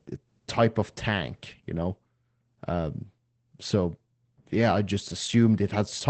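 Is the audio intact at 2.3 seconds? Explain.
No. At 2.3 seconds the speech sounds muffled and hoarse, with a faint robotic edge, and nothing is heard above about 8.5 kHz. This is Opus voice compression, present for the whole clip. The coder is running in its SILK linear-prediction mode at wideband, which cuts the top of the spectrum and codes the excitation coarsely. The plainly audible damage fits a low bitrate of around 12 kbps.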